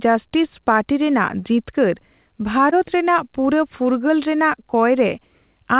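Around 2.70 to 2.74 s, just before "ᱨᱮᱱᱟᱜ ᱯᱩᱨᱟᱹ", there's a short concealed packet loss. About 20 ms of audio didn't arrive in time, so the receiver stretched the preceding sound to cover the gap and then blended back in, leaving a quick smear in the speech, heard over the call's narrowband sound, which stops at 4 kHz as G.711 does.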